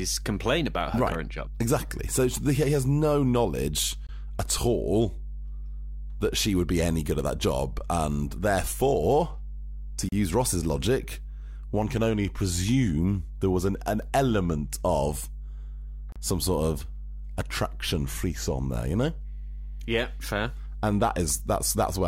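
Speech, with a steady 50 Hz mains hum throughout, strong at roughly 10 dB below the speech, from a ground loop or nearby transformer coupling the power line into the signal. Gaps at a join of encoded pieces recur every 6 s: 22 ms at 4.07 s between "he has no knowledge" and "at all", 34 ms from 10.09 to 10.12 s after "therefore to", and 34 ms from 16.12 to 16.16 s before "some sort of attraction". Separately encoded segments were joined untrimmed, leaving each encoder's start delay and final-frame padding in place.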